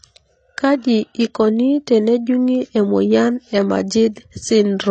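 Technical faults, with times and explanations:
Throughout, AAC compression: nothing in the speech reaches above 8.7 kHz, so the top end sounds dull and closed in. The damage is plainly audible, with smearing and a warbling, fizzy texture on sustained sounds and sibilants. The likely cause is AAC-LC encoding at a low bitrate, around 24 kbps. At that rate the encoder cuts the bandwidth and quantises each frame's frequency lines coarsely, leaving holes in the spectrum or filling them with noise.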